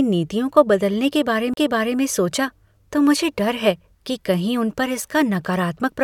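At 1.54 to 1.57 s, just after "नीतियों को बदलने" and before "सोचा तो मुझे डर", a CD skip occurs: the laser lost its track and landed on a different turn of the disc's spiral. The player mutes for roughly 40 ms, heard as a small tick, then the speech resumes from a different point. A waveform shows a near-flat gap with abrupt edges, and a spectrogram shows a thin vertical click band followed by a discontinuity in the speech pattern.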